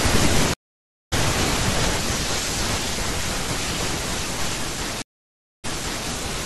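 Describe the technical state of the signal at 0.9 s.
At 0.9 s the speech is inside a stream reconnect running from 0.54 to 1.14 s: the connection broke and the player fell silent for 0.58 s while a fresh decoder restarted. Unlike a simple dropout, speech resumes roughly 0.7 s further along, skipping material.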